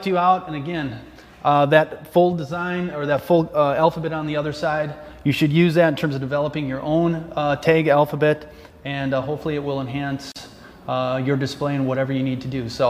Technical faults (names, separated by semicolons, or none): gap at a join of encoded pieces